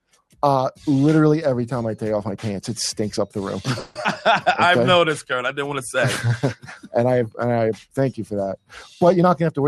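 Throughout the clip a speech-style noise suppressor applied to music or sounds keeps riding the level. It treats sustained, steady material as noise, so held parts and decays sag by a few decibels while onsets pass. The result is a gentle pumping that never settles, not a fixed tone change.

From 0.0 to 0.41 s, the sound cut by the noise suppressor is at its deepest, about 18 dB down for roughly a third of a second. The suppressor judged this stretch to be noise. Unlike a dropout, the sound thins and sinks rather than vanishing, and the attacks still poke through.

At 3.79 to 3.98 s the sound stalls for 160 ms. The last bit of audio is stretched into a fading buzz or hiss, and then playback resumes exactly where it stopped. The likely cause is a call audio freeze: delayed packets emptied the jitter buffer. Nothing is lost, only delayed, which separates it from a skip.

Right after, at 4.03 s, comes a skip ahead. 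About 70 ms of audio is dropped and the two sides are spliced almost directly. Here material is actually missing, heard as an abrupt jump rather than a hang.

From 4.67 to 5.68 s a jitter buffer slow-down repeats single pitch periods to rebuild its reserve. It adds 58 ms, so the audio runs at 95% speed with unchanged pitch. Sounds are slightly drawn out, and there is no stall or gap.

The suppressor cuts in again at 6.56 to 6.94 s, about 16 dB down; at 7.78 to 7.97 s, about 10 dB; and at 8.57 to 8.78 s, about 18 dB. Each time, sustained parts and tails collapse while transients stay intact.

From 9.16 to 9.67 s a jitter buffer speed-up trims short pitch-period slices, about 70 ms in total. The audio runs at 111% speed at the same pitch and sounds hurried, with the timing tightening. This differs from the skip ahead, where one block vanished at once.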